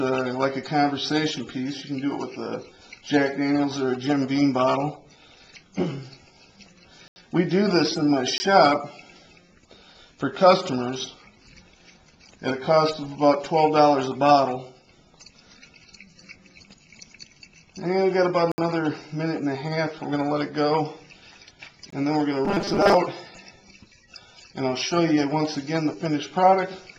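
The audio has four blocks of digital silence: 7.08–7.16 s (80 ms), 8.38–8.40 s (20 ms), 18.52–18.58 s (about 64 ms) and 21.90–21.92 s (20 ms). In each, the signal drops straight to nothing and returns with no fade. On a waveform each shows as a dead-flat line, and on a spectrogram as an empty vertical column. From 22.45 to 22.97 s there is robotic sound from repeated short buffers. It is a rigid, metallic buzz at 200 Hz that still roughly tracks the underlying sound. The likely cause is audio arriving too late, with the player looping the last 5 ms segment to fill the time while about half the real material is skipped. The spectrogram shows evenly spaced horizontal stripes at multiples of 200 Hz, and the waveform shows near-identical 5 ms cycles repeating.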